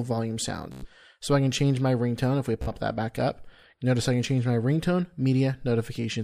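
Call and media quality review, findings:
Bluetooth stutter at 0.72–0.87 s and 2.62–2.69 s. Link dropout: packets lost or late, so the receiver loops its last buffered slice, giving a machine-gun repeat. Audio resumes about 107 ms and 46 ms further on, the untransmitted material skipped.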